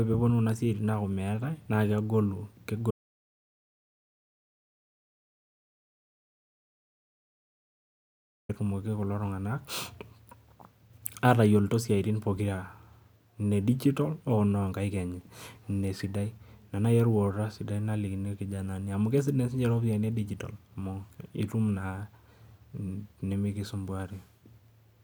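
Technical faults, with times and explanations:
2.91 to 8.49 s, audio dropout to silence: the speech cuts off abruptly and returns mid-flow after about 5.6 s of silence, with no room tone. The input was likely lost while the recorder kept writing silence, so that stretch is gone.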